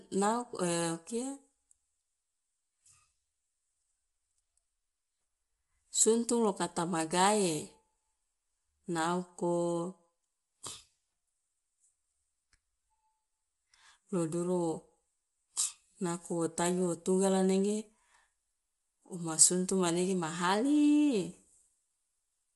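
Low-delay AAC compression runs throughout the clip, from start to finish. The speech sounds rough and grainy, with plainly audible coding damage and nothing above about 11.6 kHz. The likely cause is a low-delay codec such as AAC-ELD working at a modest rate, consistent with around 32 kbps. Its short frames capture the pitch harmonics of speech only coarsely, so the coder spends its limited bits inefficiently and the voice's detail turns granular.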